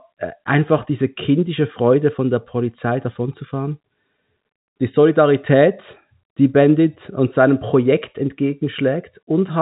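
No technical faults can be heard anywhere in this speech recording. It comes through G.711 telephone coding, so the sound stops short at about 3.8 kHz, and the faint quantisation hiss rises and falls with the level of the speech.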